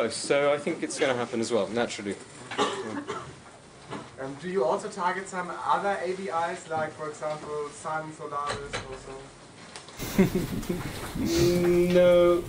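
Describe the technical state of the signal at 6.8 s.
At 6.8 s the signal sits inside a stretch running from 0.0 to 9.99 s where the input has most likely switched to a poorer device. Nothing passes above 9.8 kHz, so the sound is duller and boxier, a few dB quieter, and carries a faint new noise floor well beneath it. A spectrogram shows a flat ceiling at 9.8 kHz; the waveform shows lower amplitude that steps up, with no gap, at 9.99 s.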